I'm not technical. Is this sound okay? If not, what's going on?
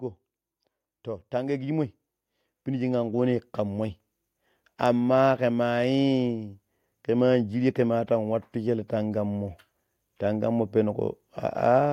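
No. There is automatic gain rising twice, from 1.03 to 2.01 s and from 2.65 to 3.94 s. The recording's level control judged the input too quiet. It turned itself up slowly. The voice and the background noise both swell louder together.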